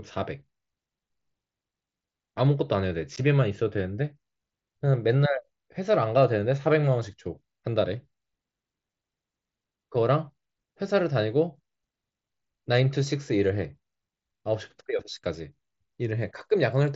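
Unconcealed Bluetooth headset packet loss occurs at 3.16 s, where the speech drops out for about 15 ms. A short run of voice packets between headset and phone failed to arrive, and nothing was generated to cover the gap, so silence or an idle pattern sits in their place; the length fits two lost mSBC frames. The hole has abrupt edges as the speech cuts off and resumes, on a link whose wideband mSBC coding adds only light graininness.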